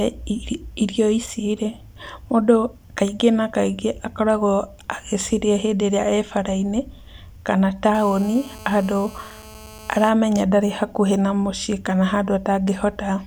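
A speech clip carrying GSM phone buzz from 7.95 to 10.09 s, ending just before "ndarĩ hakuhĩ na mũciĩ": a hard, raspy 217 Hz buzz, about 21 dB below the speech, from a nearby 2G handset on a call whose radio bursts the audio circuit rectifies. A spectrogram shows evenly spaced harmonics of 217 Hz, and the waveform shows a regular pulse train.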